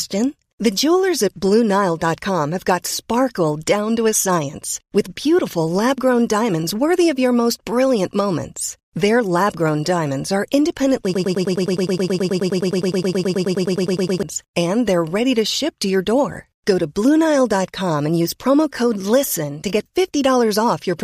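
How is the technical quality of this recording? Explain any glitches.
There's one real problem: a broken-record loop from 11.14 to 14.23 s. Right after "grown diamonds are independently", a sliver of speech about 105 ms long repeats exactly, back to back, nearly thirty times, giving a fast stuttering buzz for about three seconds before "and they're ready to" picks up. The likely cause is the player or stream stalling and resending the last fragment it held, so whatever should have been said in that gap is simply gone.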